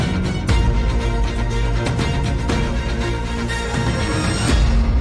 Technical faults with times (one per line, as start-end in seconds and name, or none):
none